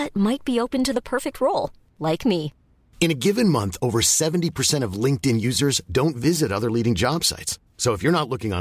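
No technical faults are audible anywhere in the speech.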